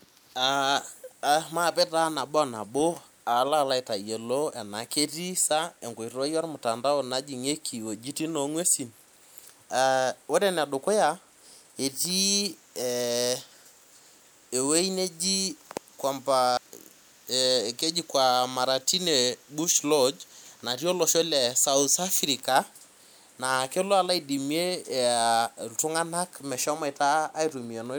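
No technical faults occur at any point in the recording.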